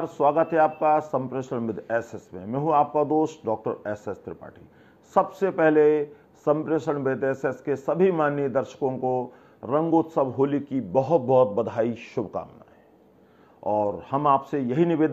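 Listening closely, nothing in the audio stood out as a technical problem at any point.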